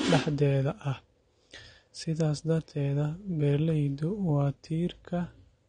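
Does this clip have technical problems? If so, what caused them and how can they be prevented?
Yes. Throughout the speech the top end stops abruptly, with nothing above about 9.7 kHz, so sibilants sound dull and smeared, and sustained sounds carry a warbling, fizzy texture. This is likely AAC compression at a low bitrate, consistent with AAC-LC around 32 kbps: the encoder dropped its cut-off and quantised the spectrum coarsely, leaving holes that swirl from frame to frame. To prevent it, encode at a higher bitrate, roughly 96 kbps or more, or keep a lossless master.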